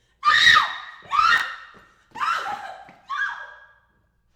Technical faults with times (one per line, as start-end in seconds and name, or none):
0.88 damaged data in a compressed stream
1.38-1.42 chunks out of order